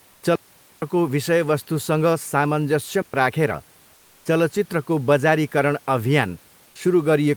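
From 0.35 to 0.82 s and again from 3.02 to 3.14 s, digital wireless dropouts mute the signal for about 470 ms and 120 ms. The receiver lost too much data and faded to near silence, leaving clean holes with no noise burst. The waveform flattens almost to zero, and the spectrogram shows empty vertical gaps.

From 3.95 to 4.25 s, just before "चलचित्रको बजारीकरण", the room background is replaced by comfort noise for 300 ms, likely from Opus-style discontinuous transmission. The sender stopped sending during the pause, and the receiver substituted steady synthetic noise about 1 dB quieter. On the spectrogram, the textured background becomes a smooth, uniform band.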